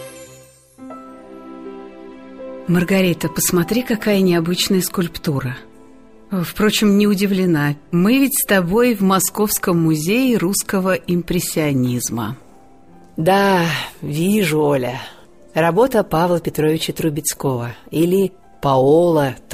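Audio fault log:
Nothing stood out on listening to this audio.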